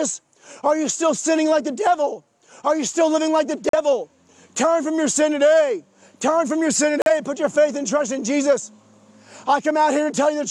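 Digital broadcast dropouts at 3.69 s and 7.02 s: each time the receiver lost valid frames and muted, leaving a hole of roughly 80 ms, which fits one lost frame of about 43 ms plus the mute and recovery. The sound cuts or quickly fades out, then resumes further along.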